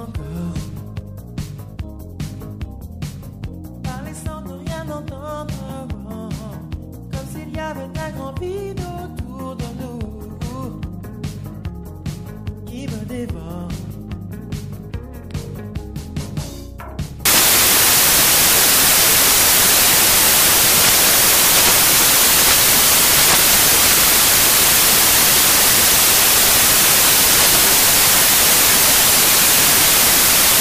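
At 17.25 s the audio collapses into loud, harsh broadband noise that runs to the end of the clip: samples built from the wrong bytes. From that point the reader assembles each sample incorrectly, so the rapidly fluctuating low-order bits land in the most significant position. On a spectrogram the band fills solidly across all frequencies, and the waveform jumps to a dense block.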